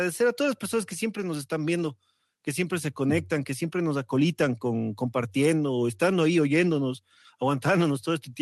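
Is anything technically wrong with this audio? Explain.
No, nothing is technically wrong here: the speech simply carries the ordinary character of a live call connection, with the high end rolling off around 12 kHz in a way that fits an Opus-coded call link working as intended.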